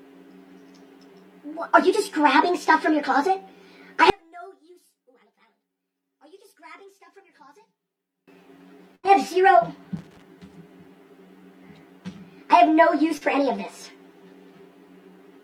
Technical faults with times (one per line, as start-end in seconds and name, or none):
4.10-8.28 one channel inverted
8.95-9.05 burst of packet loss
9.97-10.22 loose connector crackle
13.17-13.23 short concealed packet loss